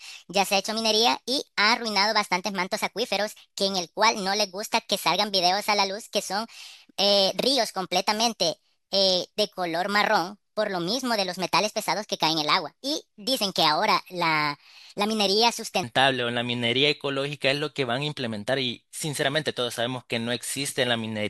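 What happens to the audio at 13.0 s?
At 13.0 s the speech is in a section at the wrong speed (0.00–15.83 s), likely played at 1.38 times speed. It sounds hurried and about five semitones high. On a spectrogram the harmonics sit higher and the syllables are squeezed closer together.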